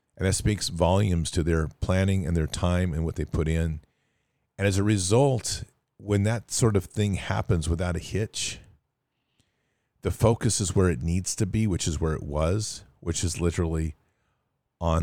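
No technical faults can be heard anywhere in the recording.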